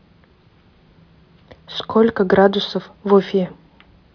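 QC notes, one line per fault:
No faults found in this recording.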